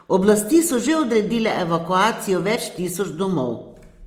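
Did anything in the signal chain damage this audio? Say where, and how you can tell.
Yes, at the codec stage, throughout the speech. The damage is plainly audible as Opus compression. Tones sound rough, grainy and noisy. It is likely the CELT music mode, refilling starved bands with folded or noise content. The band stays full, reaching about 20.3 kHz. The roughness fits a low rate near 24 kbps.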